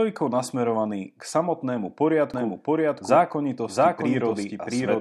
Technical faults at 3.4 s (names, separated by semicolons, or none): doubled audio track